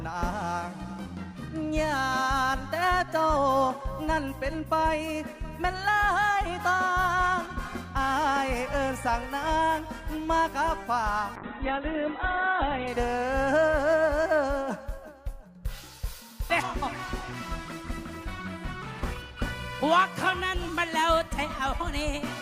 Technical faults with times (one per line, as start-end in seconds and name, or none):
11.36-12.95 call bitrate drop